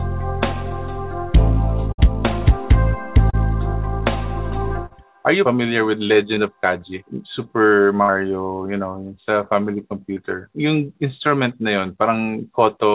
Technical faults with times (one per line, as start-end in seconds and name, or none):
1.92-2.00 burst of packet loss
3.30-3.35 short concealed packet loss
4.86-4.92 short concealed packet loss
6.34-6.38 short concealed packet loss
8.02-8.10 burst of packet loss
10.14-10.18 short concealed packet loss